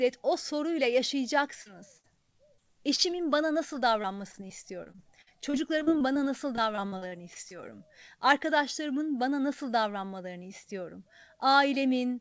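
At 1.62 s, a short concealed packet loss removes about 40 ms of the speech. The receiver bridges the hole by extending the preceding sound for roughly 37 ms before blending back into the real signal, which leaves a brief smear. The same fault returns at 2.56 s, with about 20 ms patched, and again at 2.96 to 3.00 s, just before "bana nasıl". Each one sounds like a small smear or wobble in the speech.

From 1.98 to 2.06 s, a burst of packet loss takes out about 60 ms in one piece. Concealment keeps the last sound going across the gap and lowers its level as the gap continues, so it comes out as a held buzz or fading hiss. The speech then resumes slightly further on, with the material in between gone.

After "bana nasıl", repeated packet loss (robotic sound) runs from 4.02 to 6.20 s. There are about a dozen separate dropouts, the longest around 50 ms, and roughly 300 ms is missing in total. 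Because each patch is followed closely by the next gap, the speech turns choppy. A second stretch from 6.56 to 7.52 s is denser, with about a fifth of the span concealed and gaps of up to about 39 ms. Throughout the clip nothing is heard above 8 kHz, which fits a wideband call codec such as G.722.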